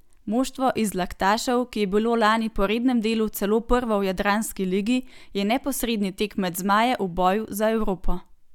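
No technical faults can be heard anywhere in the speech recording; the signal stays steady and intact throughout.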